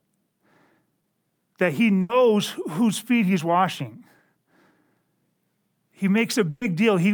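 At 1.01 to 1.05 s, short concealed packet loss: about 20 ms of speech arrived too late, so the receiver extended the preceding sound, leaving a brief smear. Bursts of packet loss at 2.01 to 2.11 s and 6.49 to 6.63 s dropped about 80 ms and 120 ms; concealment stretched and faded the last sound, then speech jumps ahead.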